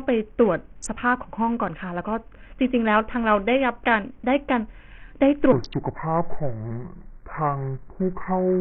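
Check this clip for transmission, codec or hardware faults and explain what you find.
Two faults are present: heavy codec damage across the whole speech clip, and a slowed final section.

Across the entire clip the treble is thin and flickers in and out, with gritty noise and aliasing riding on the speech, likely from Bluetooth SBC compression. Its crude sub-band bit allocation starves the upper bands and quantises the rest coarsely, and damage this heavy fits a very low bitrate of around 48 kbps.

From 5.52 s to the end, a section at the wrong speed plays at 0.697 times its recorded rate, likely because it was played against the wrong clock. Speed and pitch drop together, so the speech becomes slow and deep, roughly seven semitones lower.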